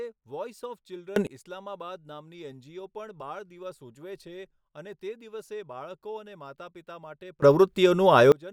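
At 1.16 s the speech and its background noise leap up together by about 24 dB, then drop back at 1.27 s; it happens again from 7.42 to 8.32 s. That's a sudden gain jump, likely a gain setting applied instantly with no ramp.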